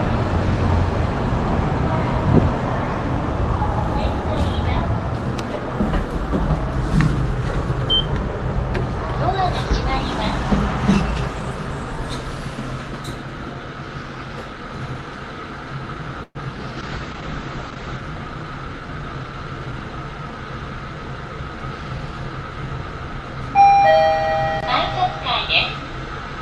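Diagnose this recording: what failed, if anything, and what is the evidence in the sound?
At 16.23 to 16.37 s the sound stalls into a fading buzz that ends in brief silence: a call audio freeze, likely delayed packets draining the jitter buffer.

From 16.79 to 18.04 s the audio turns rough and muffled: a call bitrate drop, with Opus forced from 32 to 9 kbps and bandwidth narrowed from 12 kHz to 8 kHz.

From 18.28 to 19.33 s the sound runs hurried at unchanged pitch: a jitter buffer speed-up near 112%, trimming pitch periods to shed roughly 150 ms of delay.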